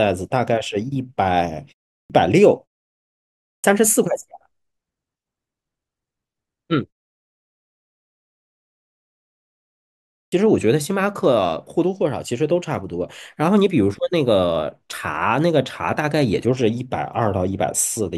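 At 2.03, 3.57 and 10.25 s, speech returns with a clipped start after a pause. The output, idle through gaps of 0.38, 0.98 and 3.41 s, needs 68 to 72 ms to wake, so each word begins abruptly, missing its first sounds.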